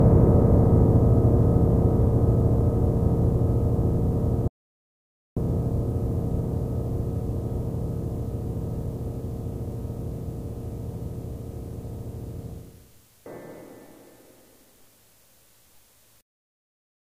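From 4.48 to 5.37 s the sound cuts out to dead silence, an audio dropout to silence of about 0.89 s, likely from lost input while recording continued.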